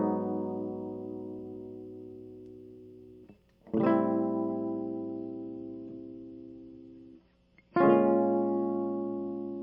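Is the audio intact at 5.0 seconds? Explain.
No. At 5.0 seconds the music is in an adaptive stream at a lower bitrate, running from 4.50 s to the end: the stream switched abruptly from about 128 to 32 kbit/s MP3 without a gap, leaving nothing above 7.1 kHz and audible coding artefacts.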